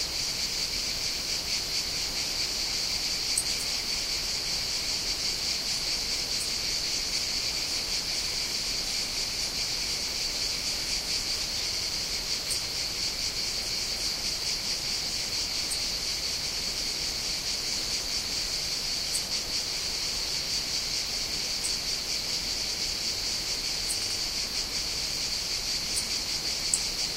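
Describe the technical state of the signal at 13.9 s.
At 13.9 s the sound stutters: the section from 13.70 to 14.04 s, a block of 341.3 ms, plays once more immediately after itself, so the same fraction of a second is heard twice in a row. This is repeated frames: a run of compressed frames, consistent with about four frames, was written or sent twice, and the decoder simply played both copies. The repeat stretches the audio by 341.3 ms at this point.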